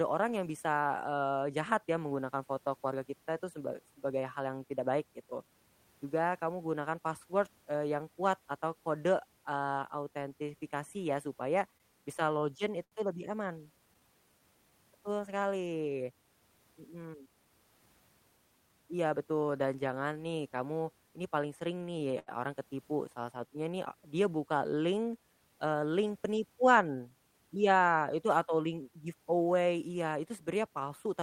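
From 11.77 to 13.98 s, just after "eee autentifikasi ya supaya", scattered short gaps appear: about four lost packets, each patched by extending the preceding sound, the longest near 70 ms. They come through as brief smears, and the spectrogram shows short stretches of frozen, smeared harmonics.

A jitter buffer slow-down follows at 14.00 to 14.72 s. The receiver repeated pitch periods, adding 60 ms, so the speech runs at 93% speed with unchanged pitch. Waveform cycles look cloned and spectral features stretch sideways.

From 16.81 to 17.46 s a jitter buffer speed-up removes about a tenth of a second of pitch periods. The speech plays at 113% and sounds hurried, with spectrogram features compressed in time.

Between "kamu ini paling sering" and "orang ketipu", from 21.78 to 22.30 s, repeated stalls (stutter) occur. The buffer ran empty five times, and 127 ms were filled with continued sound, the longest fill 77 ms. 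The speech drags and stutters, and the waveform shows repeated, faded segments.

Another slow-down, at 23.16 to 23.71 s, adds 46 ms at 93% speed. Speed-ups then follow after "nih dia buka link" (25.73 to 26.77 s, 105%) and at 30.15 to 30.67 s (106%), each trimming a few tens of milliseconds.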